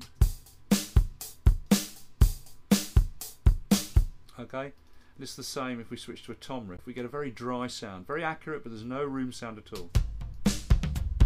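Damaged data in a compressed stream occurs at 6.77 to 6.80 s, a burst of roughly 30 ms. At that point part of the encoded stream is corrupt, so the decoder misreads the affected frames or discards them, loses its lock on the frame structure and hunts for the next valid header before decoding resumes. The result is a brief chirp or squawk that cuts across the sound, gone almost as soon as it registers.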